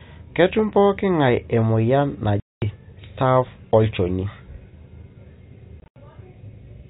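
At 2.40 s the speech drops into a 220 ms hole, and from 5.80 to 5.96 s it breaks up again, with about 120 ms missing in short gaps (the longest 80 ms). This is packet loss filled with silence: the receiver played nothing where packets failed to arrive. The gap lengths fit 20 ms packets. Each cut starts and stops abruptly. On a waveform these are flat silent stretches with vertical edges, and on a spectrogram they are blank vertical bands with a thin broadband line at each edge, all within the 4 kHz ceiling of the G.711 telephone coding.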